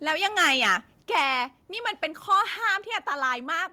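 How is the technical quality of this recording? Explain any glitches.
The speech suffers from repeated distortion and sudden level drops.

Microphone overload occurs from 0.08 to 0.75 s, 1.14 to 1.24 s and 2.32 to 2.35 s. The input was likely set too hot, so peaks exceed the converter's limit by about 7, 4 and 1 dB and their tops are sliced flat. This gives a harsh, crackly edge on the loudest syllables. In the last burst, around a tenth of the samples are clipped. Unlike codec distortion, the harshness follows loudness alone.

Microphone volume stepped down at 1.02, 2.04 and 3.06 s, by about 4, 3 and 3 dB. Software that likely reacted to the overload lowered the input gain in single steps. Voice and background fall together, instantly, with no fade. That separates it from a speaker moving away, which changes tone too.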